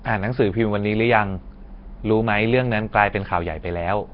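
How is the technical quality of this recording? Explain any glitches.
Technical quality is poor: the speech carries heavy, constant coding damage from start to finish. It sounds rough and hissy, with a smeared, underwater blur and nothing above about 5.3 kHz. The likely cause is Nellymoser compression, the old Flash microphone codec, at a rate that points to roughly 22 kbps. It codes short blocks with very few bits, so weak bands get none and are filled with noise. That noise fill sets it apart from plain band-limiting, which dulls sound without adding a hissy halo.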